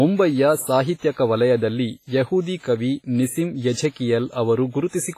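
Speech throughout shows heavy WMA compression damage: ringing, washy smearing and hiss that breathes with the voice, with nothing above 15.4 kHz, which fits a low bitrate near 24 kbps. The cause is likely the codec, rather than added noise, because the hiss rises and falls with the signal.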